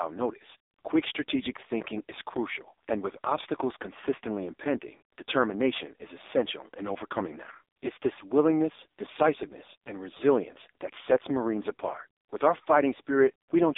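Throughout, the speech carries heavy AMR narrowband mobile codec damage. Nothing passes above 3.8 kHz. It sounds buzzy and synthetic, which fits the codec's low bitrate, near 5 kbps.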